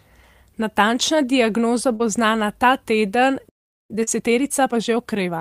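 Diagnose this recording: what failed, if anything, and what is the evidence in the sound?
Short concealed packet loss at 1.95 to 2.02 s, just before "bo znana ta teden", and again at 4.03 to 4.10 s. This is a network fault handled by the decoder. About 40 ms of audio never arrived in time each time. The receiver extended the preceding sound to fill the gap and blended back in, leaving a brief smear.

Playback stall at 3.49 to 3.90 s, right after "bo znana ta teden". The output drops to silence for about 411 ms in mid-flow, then resumes. This is a playback-stage fault, likely caused by the player's buffer running dry or its output thread being blocked.

Time-compressed catch-up from 3.90 s to the end, also at the playback stage. After the stall, the player works off its backlog by cutting out small segments and cross-fading the joins. Speech runs about 1.25 times faster at unchanged pitch.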